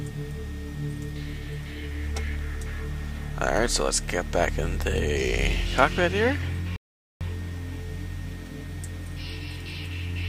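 A playback stall runs from 6.76 to 7.21 s: the sound halts mid-flow and leaves about 0.45 s of silence before continuing. The player likely ran short of data or had its output thread blocked, so nothing reached the output until it recovered.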